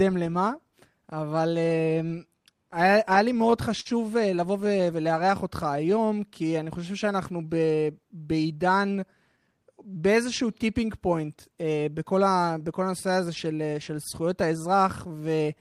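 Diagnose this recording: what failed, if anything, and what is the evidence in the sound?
Between 2.08 and 3.88 s the speech catches and drags in nine brief stutters, the longest 51 ms. These are repeated stalls: late network packets emptied the jitter buffer, and the receiver stretched the last sound each time.

From 4.64 to 6.20 s the speech slows to 95% speed without any pitch change. This is a jitter buffer slow-down, repeating pitch periods to add 83 ms of reserve.

From 8.32 to 9.55 s the speech hurries at 110% speed, with pitch unchanged. This jitter buffer speed-up trimmed about 150 ms of pitch periods to shed excess buffered delay.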